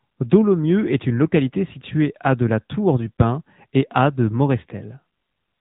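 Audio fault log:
throughout AMR narrowband mobile codec: the speech is cut off above 3.8 kHz and has a plainly buzzy, synthetic edge, which fits a mid-rate AMR-NB mode around 10 kbps.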